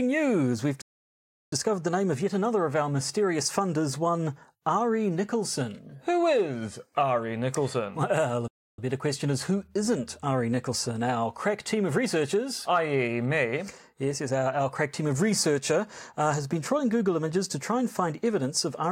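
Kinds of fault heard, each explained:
Playback stall: the speech halts abruptly and the output falls silent for about 0.71 s from 0.82 s, then again for about 0.3 s after "a uh", resuming at "better question is who"; the likely cause is the player starving for data or being blocked.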